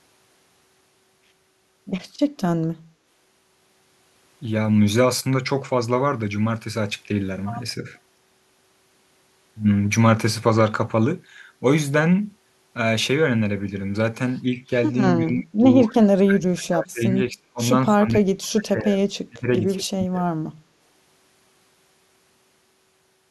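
Speech suppressed in double talk at 15.25–15.64, 15.86–17.59, 17.84–19.01, 19.26–19.48 and 19.78–20.22 s: the speech drops away in chunks, by up to about 35 dB, likely from an echo canceller muting during overlapping talk.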